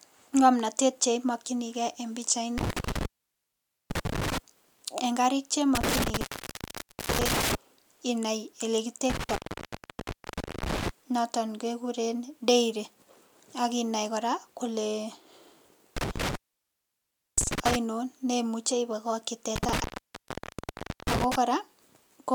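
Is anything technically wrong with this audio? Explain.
Yes, this speech has an intermittent contact fault, most likely a loose cable or plug. It hits five times, in windows at 2.58 to 4.38 s, 5.75 to 7.55 s, 9.10 to 10.89 s, 15.97 to 17.76 s and 19.56 to 21.36 s. Within each window the connection opens, dropping the sound for 0.85, 0.88, 1.28, 1.02 and 1.23 s respectively. You get a crackle as the contact breaks and remakes, with faint hiss in between.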